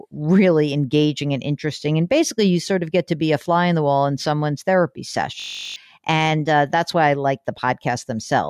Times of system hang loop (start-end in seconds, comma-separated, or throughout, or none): 5.40-5.76